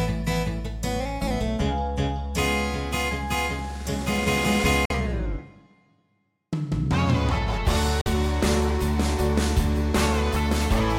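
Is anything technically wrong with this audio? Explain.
Yes. Two short gaps of silence interrupt the sound, at 4.85–4.92 s and 8.01–8.07 s, each about 46 ms long. They point to a Bluetooth dropout, most likely packets reaching the headphones too late and being discarded. Each gap is the length of two lost packets. After each gap the audio picks up where it would have been had it kept playing, so material is skipped, not delayed. A buffer underrun, by contrast, pauses and then resumes with nothing missing.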